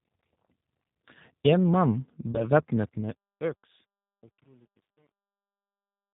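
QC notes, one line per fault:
Throughout: G.729 codec. The speech passes through a low-rate CELP coder, which fits G.729A at 8 kbit/s. It rebuilds the voice from a filter, pitch predictor and sparse pulses and cuts everything above 4 kHz, so the speech sounds muffled, rough and plainly synthetic.
2.32 to 2.44 s: VoIP packet loss concealed by the speech codec. About 20 ms of stream went missing, which fits a single lost packet. The decoder extrapolated from its last pitch and filter at falling gain, leaving a brief buzzy or noisy smear that stays weak and distorted until about 2.44 s.
2.77 to 6.13 s: truncation distortion on a fade. During the fade-out, which starts around 2.8 s and ends at 6.14 s, the gain stage kept too few bits, about 10, with no dither. The quietest samples collapse into coarse steps, so from 3.51 s the tail turns gritty.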